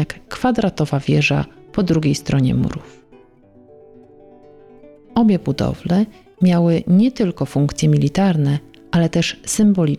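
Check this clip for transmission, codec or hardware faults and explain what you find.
No transmission, codec or hardware fault can be heard; the signal stays continuous and stable throughout, with no breaks, level jumps or added noise.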